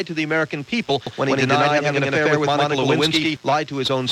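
At 0.88 s a short glitch cuts across the sound. This is damaged data in a compressed stream: data in the encoded file was wrong, so the decoder misread that frame, lost its place and hunted for the next valid header before carrying on.

From 1.07 s to 3.37 s the audio is heard twice, with a second copy trailing about a tenth of a second behind and roughly as loud as the first. This doubled audio track most likely comes from the same signal being picked up again through a slower path and mixed back in. What sets it apart from an echo or reverberation is that the trailing copy is full-band, does not fade or take on any room colour, and switches on and off abruptly at both ends.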